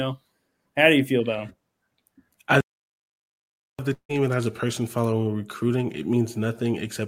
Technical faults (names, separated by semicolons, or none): playback stall; long network dropout